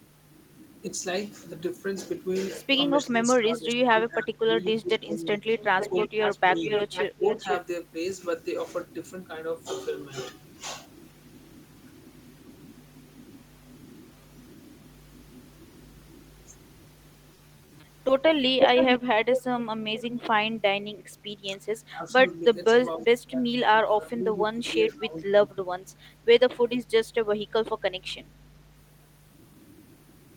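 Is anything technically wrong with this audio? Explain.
Yes, three kinds of fault occur.

Speech suppressed in double talk: from 3.09 to 7.45 s, at 19.02 to 19.08 s, and from 21.95 to 25.87 s the voice dips sharply, by about 20 dB at worst in the first stretch and about 15 dB later. Roughly two seconds are affected in the first stretch and about a second and a half in the last. The likely cause is an echo canceller that, with both sides talking, could not tell the near talker from loudspeaker echo and turned everything down. Unlike packet loss, the sound is attenuated rather than patched or made metallic.

Echo leak: a delayed copy of the voice trails it by 488 ms, from 5.58 to 7.57 s at about 10 dB below the speech, from 18.59 to 20.20 s at about the same level as the speech, and as a faint scrap at 21.16 to 21.20 s, about 40 dB down. A far-end loudspeaker's echo was likely not fully cancelled and was sent back. 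The fixed half-second lag distinguishes it from room reverberation, which would smear continuously instead.

Repeated packet loss (robotic sound): from 17.34 to 18.31 s the audio turns choppy. It has a string of brief holes, none longer than 20 ms, with about 80 ms missing outright and about 110 ms filled by stretching the preceding sound, so about 11% of that span is concealed. The rapid dropouts, with pieces missing, set it apart from the level dips of double-talk suppression.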